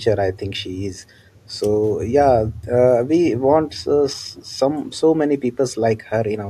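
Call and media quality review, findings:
Faint, brief delayed copy of the speech at 4.33–4.45 s, trailing the original by 446 ms and sitting well below it. Echo leak: likely a loudspeaker endpoint whose echo canceller let residual mic pickup through, sent back into the call.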